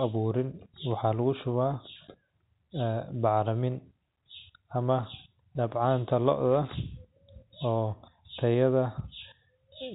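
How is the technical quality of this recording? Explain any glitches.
No glitches; the speech has no technical faults.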